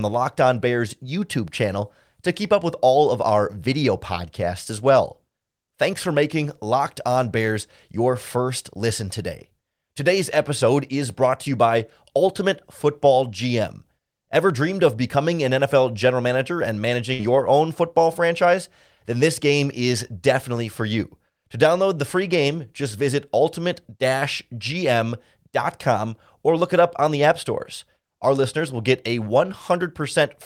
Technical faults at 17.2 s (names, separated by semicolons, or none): burst of packet loss